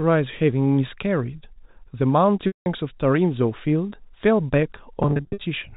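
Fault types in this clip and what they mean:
Packet loss with pitch repetition: Missing audio is bridged by repeating the last pitch period, then fading it. At 2.47 s, 190 ms drops out, and a brief buzzy hold decays to silence. From 5.03 to 5.41 s, scattered gaps up to 50 ms give stuttering buzzy holds.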